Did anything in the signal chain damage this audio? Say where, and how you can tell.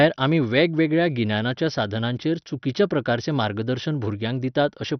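Yes. The damage is at the codec stage and runs through the whole speech clip. Nothing is present above 6.1 kHz, so the voice sounds dull, and what remains has a gurgling, granular roughness with upper detail flickering in and out. That pattern points to heavy MP2 compression, likely at a low rate around 48 kbps: starved of bits, the sub-band coder switches off its upper bands entirely and quantises the surviving bands coarsely.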